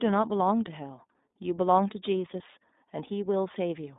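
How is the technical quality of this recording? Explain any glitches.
The quality is limited throughout by a narrowband speech codec. An iLBC codec, consistent with its 15.2 kbps mode, codes each 20 ms frame independently and discards everything above 3.8 kHz, leaving speech muffled and plainly rough and synthetic.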